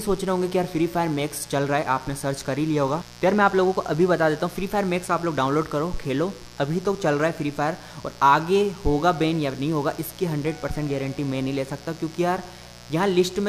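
Mains buzz runs throughout: spiky 60 Hz interference with harmonics into the kilohertz range, leaking in from a dimmer or poor shielding, sits roughly 20 dB under the sound as a raspy drone.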